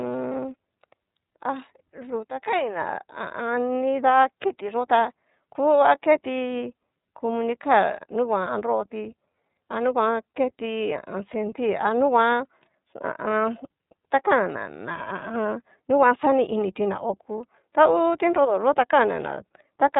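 From start to end, the speech carries plainly audible iLBC codec damage. Nothing above 3.8 kHz survives. Each frame is coded alone, leaving a rough, synthetic edge. This fits 30 ms frames at 13.33 kbps.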